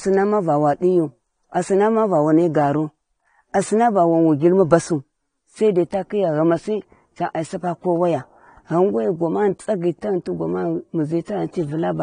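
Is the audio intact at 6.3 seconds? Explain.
No. At 6.3 seconds the speech carries the same damage heard across the whole clip, which is likely AAC compression. Nothing reaches above about 9.7 kHz, so the top end is missing and the sound is dull. The codec's artefacts are plainly audible as smearing and a fizzy, warbling edge on sibilants, which fits AAC-LC running at a low bitrate of around 32 kbps and starving the frequency lines of bits.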